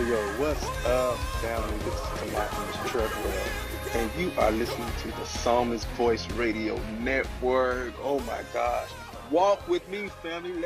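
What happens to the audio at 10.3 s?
Nothing goes wrong at 10.3 s; the audio plays through that moment intact, with no dropout, click or distortion.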